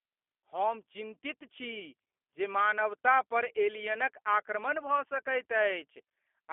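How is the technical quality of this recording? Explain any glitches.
The technical quality is limited by one fault that runs through the whole recording.

G.729 codec damage is plainly audible throughout. The speech sits in a 300 Hz to 3.4 kHz telephone band, with nothing above 3.4 kHz, and has a rough, buzzy, synthetic edge. That comes from rebuilding the voice from a vocal-tract model and a few pulses per frame, at a rate that fits 8 kbit/s. Simple band-limiting would only sound muffled, not coarse like this.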